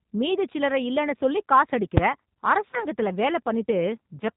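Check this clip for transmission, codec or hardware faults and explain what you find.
Three faults are audible: G.729 codec damage throughout, a single full-scale bang from invalid numbers, and a stretch of concealed VoIP packet loss.

G.729 codec colouring runs through the whole speech clip and is plainly audible. The codec rebuilds each 10 ms frame from a vocal tract filter, a pitch predictor and a few pulses, which gives the voice a rough, slightly synthetic quality with nothing above 4 kHz. The sound fits an 8 kbit/s G.729A stream.

At 1.97 s, just after "சில்லறை இல்லன்னு சொல்லி காசு", there is one sharp bang from invalid numbers at full scale. A calculation produced infinite or invalid values that were clamped to the maximum sample value for a block of about 5 ms, too short to hear as anything but a single click-like bang.

From 2.71 to 2.83 s the speech is stretched and fades, then takes a moment to recover. 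This is VoIP packet loss concealed by the speech codec. Roughly 20 ms of audio went missing, which points to a single lost packet. The decoder extrapolated from its last pitch and filter state with falling gain, and because each frame depends on the previous one, the distortion persists for about 100 ms after the gap.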